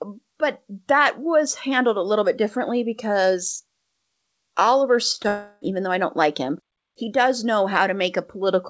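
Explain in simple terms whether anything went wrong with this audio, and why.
Something did go wrong, just after five seconds. At 5.12 to 5.16, 5.16 to 5.20 and 5.22 to 5.26 s there is short concealed packet loss. Each time about 20 ms of sound failed to arrive, and the receiver filled the gap by stretching the previous sound. You hear quick smears or wobbles, not gaps.

Right after, from 5.28 to 5.63 s, comes a long network dropout, likely caused by the connection stalling. About a third of a second never arrived. Unlike the short blips, this is long enough to hear as a fading buzz or hiss in place of the real sound. The speech then resumes with that piece missing.

The call codec also removes everything above 8 kHz, which makes the sound dull throughout.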